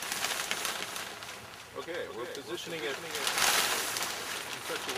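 From 0.82 s to 3.44 s the audio carries a doubled audio track. A second, full-band copy of the same sound trails the original by roughly a third of a second. It sits a few decibels below it. The copy has no decay and no room colour. It switches in and out abruptly at both ends. The likely cause is a second capture through a slower path being mixed back with the first.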